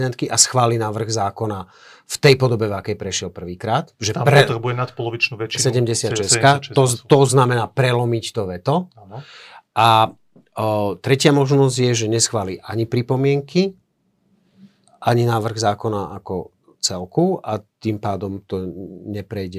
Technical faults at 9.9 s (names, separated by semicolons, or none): none